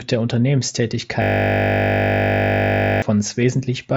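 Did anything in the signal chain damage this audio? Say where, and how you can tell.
Yes. At the driver or buffer stage, a system hang loop runs from 1.22 to 3.02 s. A 20 ms slice repeats 90 times, heard as a steady 50 Hz buzz. That fits a stalled host while the hardware kept replaying one ring buffer, losing around two seconds of speech.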